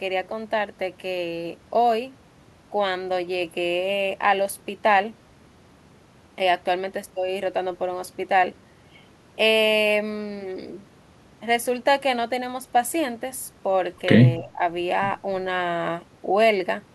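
Around 14.39 to 14.61 s there's a brief dip in the speech. Over roughly 150 ms of that stretch the level sinks, at worst by something like 10 dB, then comes straight back. It sounds like speech suppressed in double talk: the other end was likely talking at the same moment, and the echo canceller, unable to tell this talker from its own loudspeaker echo, pulled everything down together.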